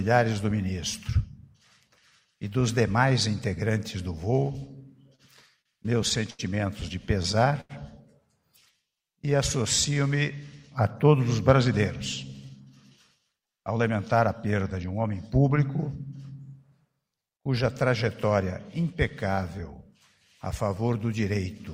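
From 5.15 to 6.41 s there are repeated stalls (stutter): packets reach the receiver late again and again, so its jitter buffer empties five times and the last sound is carried on to fill each gap, about 174 ms in total, roughly 14% of that stretch, with the longest hold lasting 85 ms. Nothing is lost, yet the audio drags and hiccups. It differs from a single late packet because the holds recur in a cluster rather than once.

At 7.61 to 7.71 s comes a short stall from a late packet: one packet misses its slot, the buffer runs dry, and the preceding sound is stretched for 88 ms until it arrives, after which playback resumes exactly where it left off, now 88 ms further behind. The result is one held sound with a faint buzz or dip. Unlike the stutter, it is a lone, isolated hold.

From 8.72 to 9.95 s the jitter buffer slow-down is audible. To rebuild its reserve, the receiver repeats single pitch periods or fragments of pauses many times over, adding 115 ms and running the audio at about 91% speed. 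Pitch stays put while sounds are drawn out, sometimes with a slight warble. What separates it from a stall is that the stretching is spread smoothly across the whole span instead of freezing on one sound.

Between 12.45 and 15.15 s the opposite happens, a jitter buffer speed-up. The buffer holds more audio than its target, so the receiver trims short pieces of one or a few pitch periods, over and over, cutting away about 0.2 s in total. Playback runs at about 108% speed without any pitch change, which gives the audio a hurried feel. It mirrors the slow-down: material is removed rather than repeated, so the timing tightens instead of dragging.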